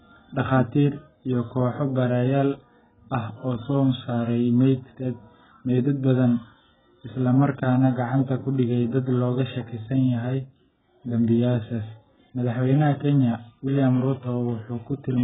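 From start to finish, nothing sounds above about 3.7 kHz, so the speech is dull and muffled. Consonants smear, and sibilants fizz and warble. This is likely heavy AAC compression, with missing spectral bands or substitute noise. The damage fits a very low bitrate, around 8 kbps.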